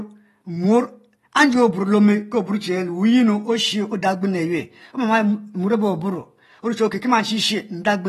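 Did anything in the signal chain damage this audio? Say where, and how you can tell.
Yes. The damage is AAC compression at the codec stage, and it runs through the whole clip. The speech sounds dull and smeared, with a plainly audible warble on sustained sounds and a fizzy edge on sibilants. Nothing is left above 12.4 kHz. This is likely AAC-LC squeezing each frame's spectrum against a hearing model at a low rate, which fits a bitrate around 36 kbps. That lowers the cut-off.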